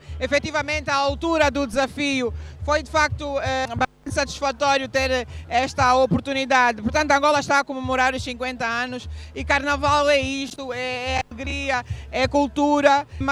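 At 1.74 s a DC step shifts the waveform's zero line by about -32 dBFS, heard as a single low thump or click. Unlike a dropout or click, the sound continues unchanged, and the offset then drains away through a 5 Hz high-pass rather than holding.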